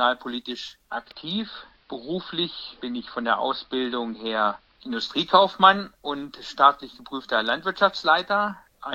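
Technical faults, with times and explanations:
0.82–5.08 s, digital radio blending to analogue: the receiver fades over about 328 ms to AM. Treble is cut, level drops about 1 dB, and faint hiss appears.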